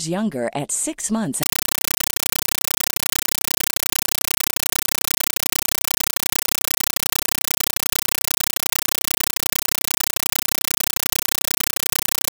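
Compressed stream played as audio, from 1.43 s to the end: about a second and a half into the speech, the signal becomes a coded bitstream treated as ordinary samples instead of being decoded. Each frame arrives as an 8 ms burst of noise followed by silent padding, repeating 31.25 times a second, a pattern that fits an AC-3 stream at 384 kbps. The result is harsh, very loud, chattering static that completely replaces the speech.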